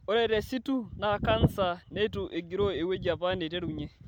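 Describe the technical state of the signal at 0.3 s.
Generation loss is present at 0.3 s, as it is throughout the speech. The smearing and hollowness fit audio that was most likely passed through a lossy MP3 chain around seven times, with the character pointing to a moderate bitrate near 128 kbit/s. Each re-encode quantised on a shifted frame grid, piling up fresh noise and spectral gaps. At this moment the speech sounds swirly and hollow, and its attacks are blurred.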